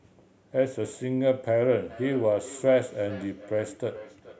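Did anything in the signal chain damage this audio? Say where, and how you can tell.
Yes. From 1.85 s to the end, a feedback echo between two devices, at the call stage, returns the speech roughly every 0.4 s, peaking about 18 dB below it. A second device in the room replays the call, and that microphone's echo canceller can't remove it.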